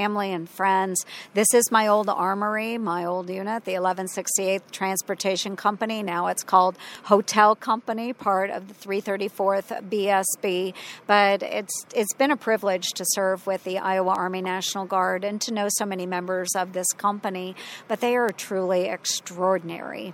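Three bit error spikes occur in this audio, at 6.95 s, 14.15 s and 18.29 s. Each is a single sharp tick from a flipped bit jumping a few samples, reaching about −18, −18 and −12 dBFS. On a waveform each shows as a lone needle; on a spectrogram, a thin full-band vertical line.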